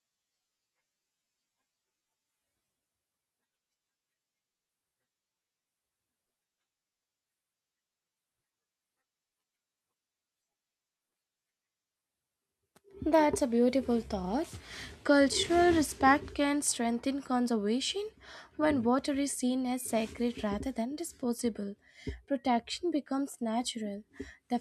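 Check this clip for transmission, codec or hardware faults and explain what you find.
Nothing in this speech recording stands out as a fault, so there's nothing to flag.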